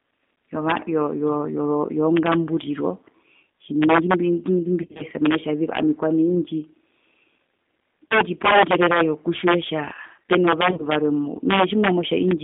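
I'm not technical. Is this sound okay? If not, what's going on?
No. Three separate problems can be heard in this speech recording.

The first is integer overflow, throughout the clip. On the loudest moments the level went past the largest number the system can store, so those peaks wrap around to the opposite extreme instead of being held at the limit. The result is sharp, violent cracks on loud syllables, harsher than ordinary clipping. Only a small share of the recording is affected, but each crack stands out.

The second is G.729 codec damage, also throughout. This is a low-quality internet-phone format that rebuilds the voice from a simplified model rather than storing it directly. Everything above about 3.6 kHz and below about 200 Hz is cut off, so the speech sounds narrow and telephone-like. It also comes across as noticeably rough and slightly artificial.

The third is VoIP packet loss concealed by the speech codec, at 4.82 to 5.04 s, 8.09 to 8.15 s and 10.71 to 10.86 s. 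Pieces of the call went missing, and the decoder filled each gap by stretching the last bit of sound it had while fading it down. These moments sound buzzy or smeared, and the voice stays weak briefly afterwards. The first dropout is the longest, with several gaps spread over about 180 ms.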